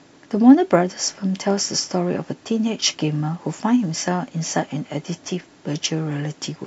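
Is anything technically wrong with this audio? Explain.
Yes. Throughout the clip, the resampler was restarted on every block. Each 50 ms block was converted on its own, which fits a 44.1 kHz to 48 kHz conversion, leaving a small error at every block edge. This produces a steady tick at 20 Hz that sits under the speech.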